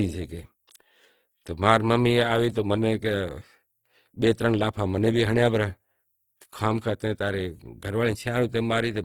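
From start to finish, the speech has a grainy, rough texture. Tonal parts of the voice turn noisy instead of clean. The damage is plainly audible. The cause is likely Opus compression in its music (CELT) mode. Short of bits, the encoder keeps each band's energy but fills in detail with folded copies of lower bands or with noise. So there is little swirl, just grit. The bandwidth stays wide, reaching about 20.2 kHz. The roughness fits a low rate near 16 kbps.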